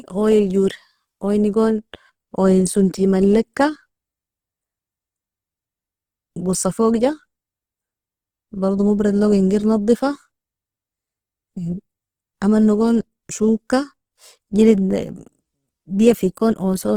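Throughout the clip, the speech has most likely passed through Opus compression running in its music-oriented CELT mode at a very low bitrate, which fits roughly 16 kbps. Starved of bits, the encoder keeps each band's energy but refills the detail with folded copies of lower bands or noise. Nothing is missing from the top, where the sound reaches about 20.2 kHz, but the damage is plainly audible: tonal parts turn rough, noisy and grainy.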